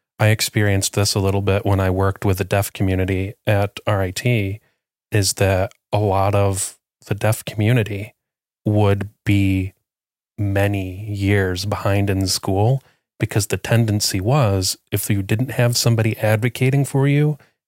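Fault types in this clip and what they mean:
No technical faults are audible.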